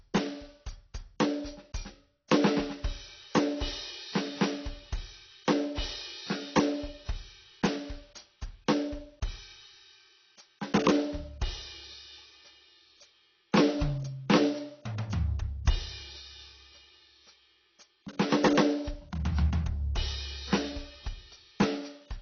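The music sounds dull and smeared from start to finish, with nothing above about 6.6 kHz and a plainly audible warbling, fizzy texture on sustained tones. This is likely AAC compression: the low cut-off fits a bitrate around 24 kbps.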